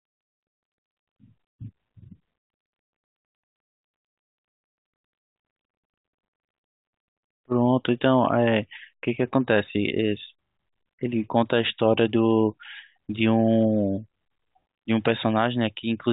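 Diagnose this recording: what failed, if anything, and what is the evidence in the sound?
No fault detected anywhere in this recording.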